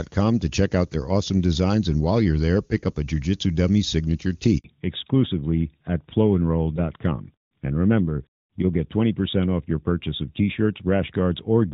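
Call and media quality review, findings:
Handover gap at 4.58 to 4.64 s: 60 ms dropout, audio dies then resumes. Network handover, no frames delivered while the link switched over.

Fallback to narrowband from 4.64 s to end: nothing above 4 kHz, duller and rougher. Call dropped from the clean-sounding HD Voice codec, which fits AMR-NB at around 12.2 kbit/s.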